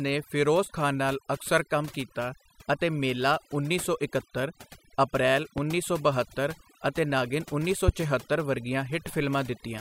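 Throughout the speech, overdone noise removal has gated bands sitting near the noise floor, leaving near-silent pauses with twinkling specks. Loud pops at 5.58–5.61 s and 7.88–7.91 s, roughly 10 and 20 dB above the speech, are likely voltage spikes from a plug, switch or static discharge.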